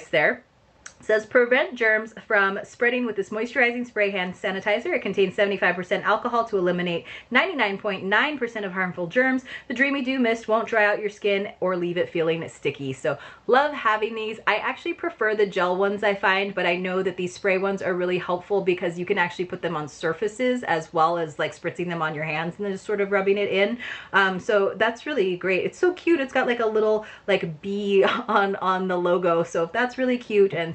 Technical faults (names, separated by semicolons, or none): none